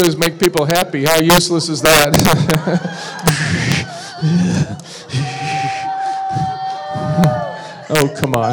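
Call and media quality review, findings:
Integer overflow: violent cracks on loud peaks at 0.00–1.38 s (about 5 dB over), 1.85–2.55 s (about 7 dB), 3.28 s, 3.72 s, 7.24 s and 7.95–8.34 s. Gain or mix stage wraps past full scale to opposite sign instead of saturating. Needs clamping.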